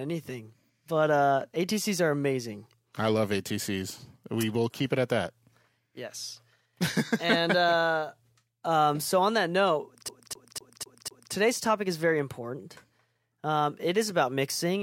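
From 10.08 to 11.33 s the speech stutters in a fast, even loop, the same 0.25 s fragment repeating five times with a tiny mute at each jump. This is a CD stuck on one turn: a scratch throws the laser back a track every revolution.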